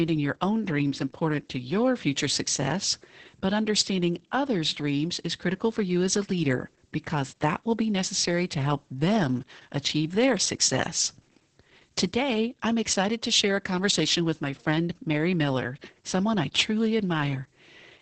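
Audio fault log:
Throughout: Opus voice compression; the SILK coder cuts everything above 8.9 kHz and coarsely codes excitation, leaving speech muffled, hoarse, slightly robotic, fitting about 10 kbps.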